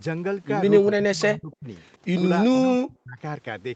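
A speech clip with speech suppressed in double talk from 0.84 to 1.68 s and from 2.51 to 3.19 s. The voice drops by up to about 40 dB, likely because the echo canceller mistook it for echo.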